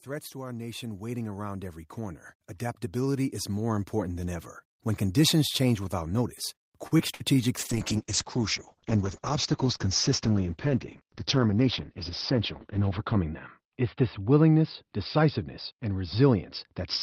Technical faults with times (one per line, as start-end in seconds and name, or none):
0.05-2.31 automatic gain rising
2.92-4.53 automatic gain rising
6.87-7.36 repeated packet loss (robotic sound)
7.59-17.03 call bitrate drop
11.53-11.81 jitter buffer speed-up